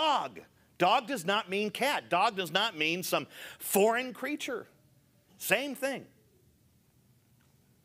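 Nothing in this bit of speech stands out as a technical fault: no dropouts, glitches or odd jumps in level, just steady audio the whole way along.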